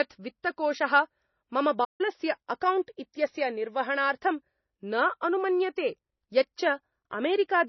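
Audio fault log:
Throughout: MP3 compression. The speech sounds watery and swirly, with chirpy, metallic s sounds and softened consonant onsets, and the top treble missing. The likely cause is heavy MP3 coding at a very low bitrate, which fits about 24 kbps. The encoder cut the treble at a fixed frequency and dropped weak frequency lines that switch on and off between frames. A spectrogram shows a hard ceiling at a fixed frequency and patchy, flickering holes in the upper bands.
1.84–2.01 s: playback stall. The speech stops dead mid-flow for about 148 ms, then resumes. This is likely the player running out of data or having its thread blocked, so it output silence until it recovered. On the waveform, the signal drops abruptly to a flat line for that stretch, with a sharp edge on both sides. On a spectrogram it appears as a clean vertical gap across all frequencies.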